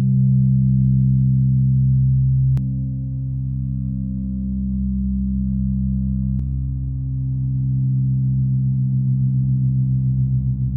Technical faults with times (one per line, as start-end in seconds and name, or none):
2.57-6.39 doubled audio track